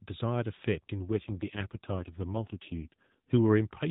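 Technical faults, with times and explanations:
1.05 to 3.19 s, AMR rate drop: speech turns buzzier and more synthetic, with no gap or band change, which fits the codec stepping down from 12.2 to 4.75 kbps.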